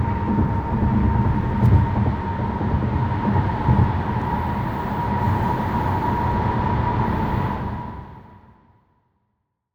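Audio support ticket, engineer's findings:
Nothing stood out on listening; the level tapers off smoothly from around 7.5 s to the end, as an editor's fade-out would.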